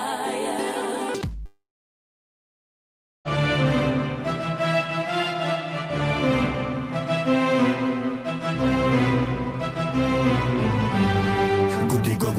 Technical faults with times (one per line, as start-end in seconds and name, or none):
1.45-3.28 long network dropout